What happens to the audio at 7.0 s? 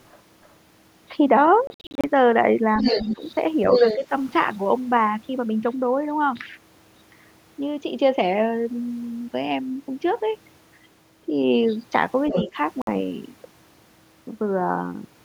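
Nothing goes wrong at 7.0 s; the speech runs through that moment intact, with no dropout, click, distortion or other fault to be heard.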